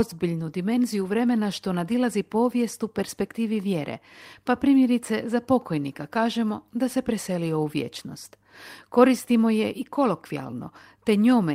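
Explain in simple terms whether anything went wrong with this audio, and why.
Nothing went wrong that I could pick out by ear in this speech recording.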